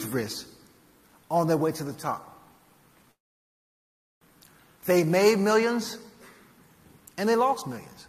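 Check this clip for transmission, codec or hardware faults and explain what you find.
One transmission fault is audible: a call audio freeze from 3.11 to 4.23 s. The sound stops and holds for about 1.1 s; the last few tens of milliseconds carry on briefly, then about 1.06 s of silence follows before the audio resumes exactly where it left off, with nothing lost. The likely cause is delayed packets draining the jitter buffer. On a spectrogram this shows as a short smeared tail followed by an empty vertical band; the waveform flattens to silence for that stretch.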